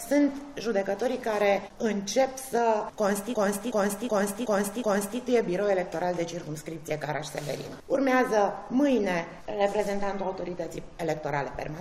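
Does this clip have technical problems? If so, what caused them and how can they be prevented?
Yes. From 3.34 to 5.20 s there's a system hang loop: the machine or its audio driver stalled while the sound hardware kept replaying its ring buffer. A 0.37 s chunk repeats five times at about 2.7 Hz, giving that machine-gun stutter. The loop length fits a 16384-sample buffer, and once playback picks up again, next to nothing seems to be missing from the audio. To prevent it, sort out driver stability and avoid overloading the system so the audio thread never stalls.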